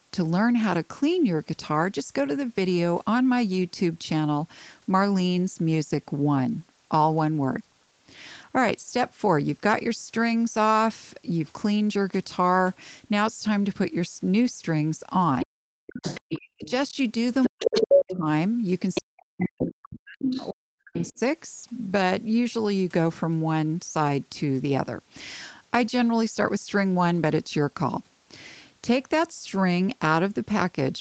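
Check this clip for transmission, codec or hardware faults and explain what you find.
Two related faults cluster between 15.4 and 21.2 s of the speech, where a second voice breaks in and the main talker dips away. The audio is band-limited to about 8 kHz throughout, consistent with a wideband call codec such as Opus.

Other side's voice leaking through: A second voice appears at 15.4–16.7 s, 17.43–18.17 s, 18.94–19.49 s and 20.22–21.19 s. It sits a few dB below the talker in the first and third stretches, slightly above in the second, and well down in the last. The likely cause is loudspeaker playback of the far end reaching the microphone, where the echo canceller left a residue instead of removing it fully.

Speech suppressed in double talk: Overlapping those intrusions, the talker's voice drops sharply, by around 40 dB at its deepest, at 15.45–16.94 s, 17.49–18.27 s and 19.02–21.19 s. 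The affected portions total roughly half a second, then most of a second, then about two seconds. This is likely the echo canceller failing to tell near speech from echo while both sides talked, and attenuating everything at once.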